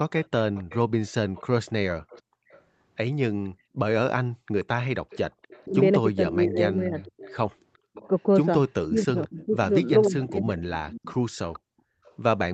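From 0.23 s to 12.14 s, a faint delayed copy of the speech trails it by about 0.48 s, some 20 dB below. This is an echo leak, likely from a loudspeaker whose echo canceller let part of the signal back into the microphone. On a spectrogram it appears as a weak duplicate of each harmonic pattern, shifted right by roughly half a second.

Between 2.23 s and 3.73 s the room sound drops out for about half a second in total, plunging by about 40 dB. That is background gated by the echo canceller, which clamped the microphone while the loudspeaker played. The same gating returns at 7.8 s to 7.91 s and at 11.63 s to 12.03 s, both by about 40 dB. The waveform's noise floor collapses to near silence, and the spectrogram shows blank vertical gaps.

From 5.65 s to 10.61 s, the speech itself is pushed down by up to about 20 dB, for roughly a second in all. This is speech suppressed in double talk, likely caused by the canceller confusing overlapping talkers with echo. 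It sounds like dips and choppy losses. The waveform shows notched envelopes, and upper harmonics thin out on the spectrogram beneath the 8 kHz ceiling of the Opus call path.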